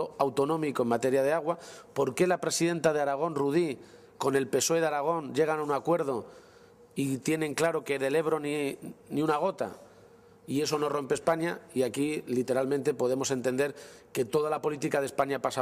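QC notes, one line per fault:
Nothing to flag here, the whole thing comes across without a single hitch worth noting.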